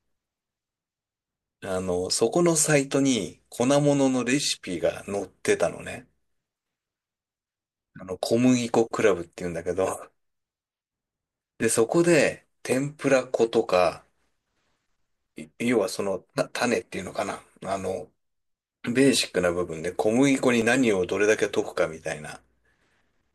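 Most likely, dropped samples: the speech stream briefly skips ahead, losing well under a millisecond of audio each time, so the waveform steps straight from one value to a later one. Nothing audible goes missing, but each step is heard as a single sharp click, a thin vertical line across the spectrum, at 4.81, 10.03, 11.63, 12.72, 19.22 and 20.62 s.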